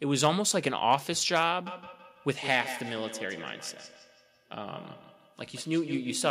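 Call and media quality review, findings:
Feedback echo between two devices from 1.66 s to end. Speech returns about every 150 ms, peaking about 13 dB below speech. Second device's playback re-captured; its echo canceller can't remove it.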